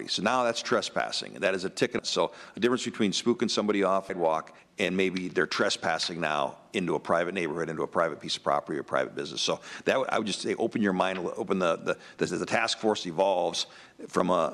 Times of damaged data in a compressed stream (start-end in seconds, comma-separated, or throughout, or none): 1.98, 4.09